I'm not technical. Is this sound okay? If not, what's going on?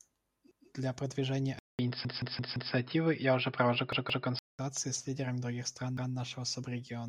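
No. From 1.59 to 4.59 seconds, the speech turns dull and muffled, with nothing above about 5.2 kHz. There is a brief gap of about 0.2 seconds at the switch, a small jump in loudness, and faint new background noise. This is likely an input switched to a poorer device, such as a headset taking over.

There is also a repeated buffer. The computer ran out of fresh sound and replayed the last piece, about 0.17 seconds long. It makes a stutter from 2.05 to 2.73 seconds (four extra repeats), 3.93 to 4.27 seconds (two), and 5.97 to 6.14 seconds (one).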